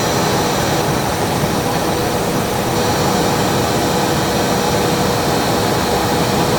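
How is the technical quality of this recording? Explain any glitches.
The quality dips once, briefly. From 0.83 s to 2.81 s the sound turns rough and watery, with the top end dulled, and it stays at its coarsest for about 1.9 s before clearing. This is a call bitrate drop: the call's bandwidth estimate fell and the encoder was given far fewer bits, and the degradation fits a fall from about 64 to 26 kbps. With so few bits, coding becomes coarse and high frequencies are trimmed until the rate recovers.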